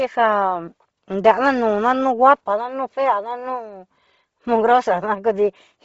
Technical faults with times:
0.00-5.85 Bluetooth LC3 compression

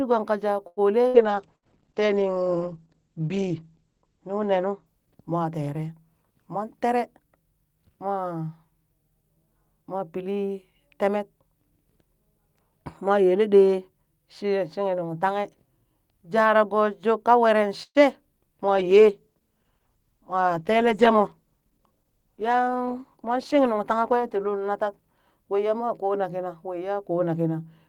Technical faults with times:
0.67-0.80 short stall from a late packet
1.08-1.17 burst of packet loss
1.15-6.87 call bitrate drop
1.56-1.65 burst of packet loss
6.42-7.83 jitter buffer speed-up
17.83-17.98 call audio freeze
18.71-26.23 call bitrate drop
20.48-21.96 jitter buffer speed-up

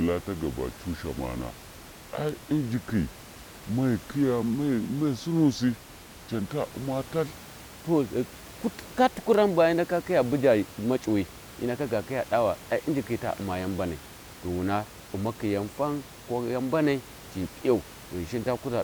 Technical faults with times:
0.00-7.27 section at the wrong speed

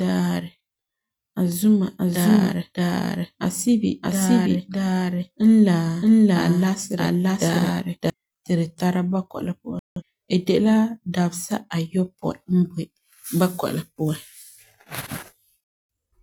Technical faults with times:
1.98-8.10 doubled audio track
9.79-10.02 digital broadcast dropout
15.64-15.89 digital broadcast dropout

